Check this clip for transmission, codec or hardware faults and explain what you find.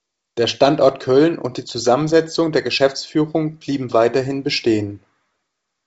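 No faults found in transmission.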